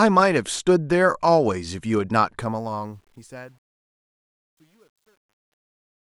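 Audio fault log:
2.40–6.00 s, truncation distortion on a fade: the fade-out of the speech, starting around 2.4 seconds in, is computed with about 10 bits and no dither. The waveform collapses into coarse square steps, turning the quiet tail gritty, worst from 3.3 s to the end.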